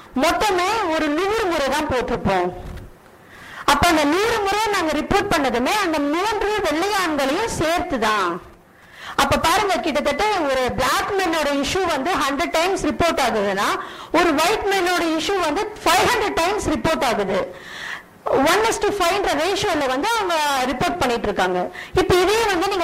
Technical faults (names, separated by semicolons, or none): none